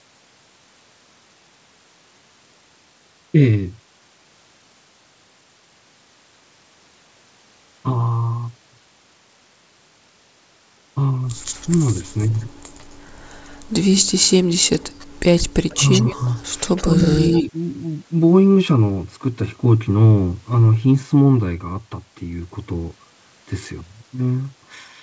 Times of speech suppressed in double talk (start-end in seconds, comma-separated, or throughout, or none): 15.74-16.22, 16.87-17.04, 17.42-17.54